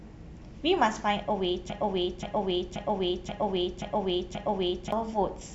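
From 1.70 s to 4.92 s the speech stops moving forward and a single fragment of about 0.53 s plays back to back, repeated 6 times, each pass identical, like a broken record. This broken-record loop most likely comes from the player, encoder or stream stalling and continuing to output the last fragment it held. Whatever speech should have occupied those three seconds never arrives and is lost.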